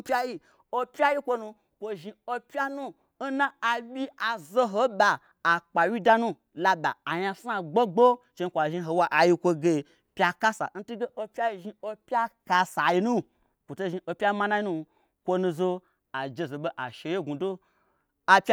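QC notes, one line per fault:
No faults found in this speech recording.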